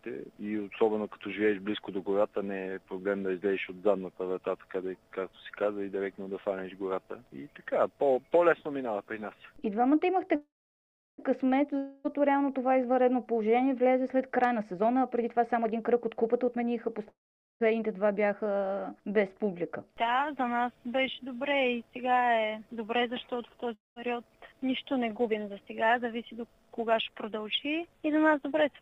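At 10.35 s, a call audio freeze: delayed packets likely emptied the jitter buffer, so the last sound carries on as a fading buzz, then about 0.71 s of silence, before resuming at 11.20 s with nothing missing. At 11.78 s, a long network dropout, likely from packets that never arrived: a fading fill runs to 12.06 s, and about 0.26 s of audio is lost. From 14.32 to 16.99 s, a jitter buffer speed-up: the overfilled buffer is drained by trimming pitch-period slices, so the audio plays about 22% faster at unchanged pitch, sounding hurried and shedding roughly 0.7 s. At 17.08 s, another call audio freeze, likely a buffer underrun again: a brief fading buzz gives way to about 0.46 s of silence, and the audio picks up intact at 17.62 s. At 23.74 s, a second long network dropout, likely from lost packets: a short fade, then about 0.18 s of silence until 23.98 s, with about 0.22 s of audio gone. From 25.27 to 28.39 s, a milder jitter buffer speed-up runs about 8% fast at the same pitch, removing roughly 0.3 s.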